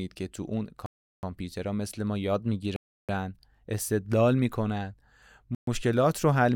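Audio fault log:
0.86–1.23 s, 2.76–3.09 s, 5.55–5.67 s: Bluetooth stall. The speech cuts to dead silence for 0.37 s, 0.33 s and 0.13 s, then carries on. The likely cause is radio interference holding up packets until the headphone buffer runs dry. Playback waits for the resent packets.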